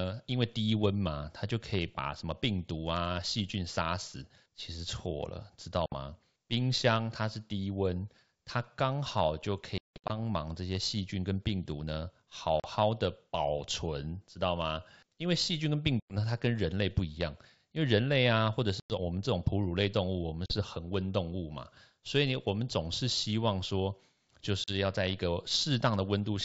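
Packet loss on an ADPCM call at 5.86, 9.78–10.11, 12.60, 16.00, 18.80, 20.46 and 24.64 s leaves silent holes; the resynchronising decoder then brings the speech back slightly distorted for a moment.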